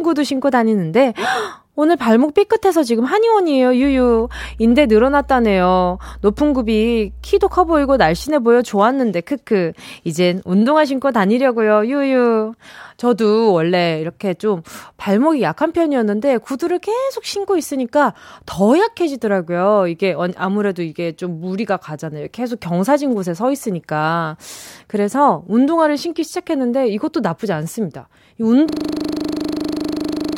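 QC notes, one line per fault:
3.82–8.27 s, mains hum: a steady 60 Hz tone with a few low harmonics sits under the speech at about 15 dB below it, then stops. A ground loop or a nearby transformer is letting the power line leak into the signal path for this stretch.
28.69 s to the end, system hang loop: one 40 ms slice of audio repeats exactly, about 42 times, giving a rapid machine-gun stutter at 25 Hz. The system froze while the sound hardware kept cycling the same ring buffer, which fits a short buffer replayed until the clip ends.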